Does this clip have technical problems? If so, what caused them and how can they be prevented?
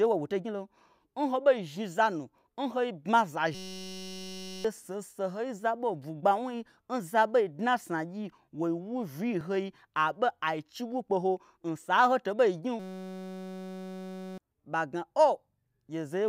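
Yes. At 3.09 s and 9.41 s the speech jumps ahead by a few milliseconds, likely a dropped buffer (overrun), with the hardware overwriting samples before the program read them. Larger buffers and higher audio-thread priority prevent this.

From 3.55 to 4.65 s and from 12.80 to 14.38 s, a system hang loop repeats one 5.33 ms fragment as a steady 188 Hz buzz, which fits a 256-sample ring buffer. About one second and 1.5 s of speech are lost. A watchdog that mutes output when the driver stalls prevents this.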